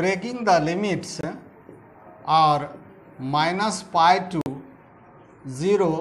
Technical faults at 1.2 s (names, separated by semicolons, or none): corrupt frame muted